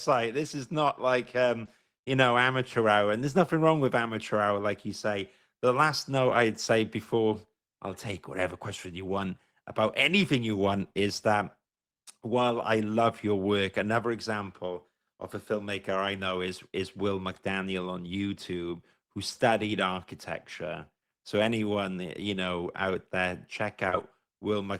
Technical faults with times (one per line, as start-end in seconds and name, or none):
1.65-1.69 short concealed packet loss
5.87-5.89 lost packet rebuilt from error correction
8.11 lost packet rebuilt from error correction
23.87-23.93 short concealed packet loss
23.91-24.01 lost packet rebuilt from error correction